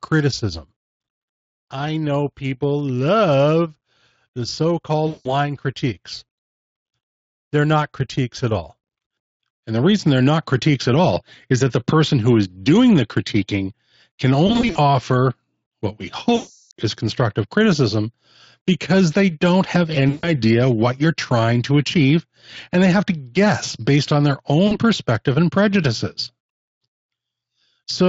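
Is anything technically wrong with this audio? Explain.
Yes. There is VoIP packet loss concealed by the speech codec, five times. It comes at 5.07 s after "the so" (180 ms lost) and at 14.47 s after "doing the critiquing can" (160 ms, scattered over 280 ms). It recurs at 16.35 s (360 ms) and 20.09 s (140 ms). The last is at 24.67 s (40 ms), between "guess based on their" and "perspective and prejudices". The decoder stretches its last pitch and filter with falling gain. Each gap becomes a fading buzzy or noisy smear, weak for a moment afterwards.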